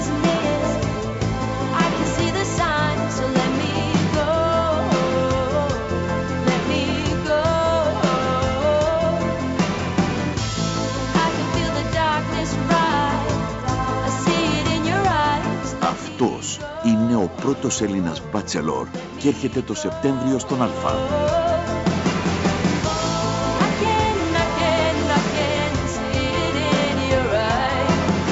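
No technical faults can be heard; the audio carries the normal signature of a call's microphone processing, with the lowest bass trimmed away and nothing above about 8 kHz.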